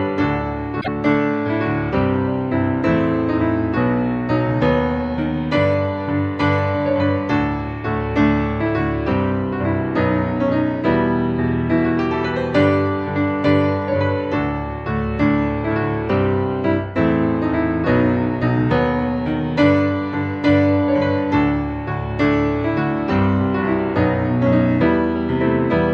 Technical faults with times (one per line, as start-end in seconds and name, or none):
0.80-0.88 broken MP3 bit reservoir